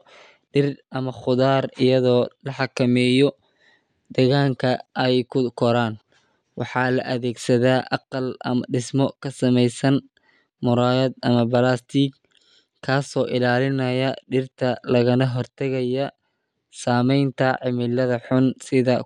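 A speech recording with no technical fault to report. Nothing in it calls for a time stamp or a cause.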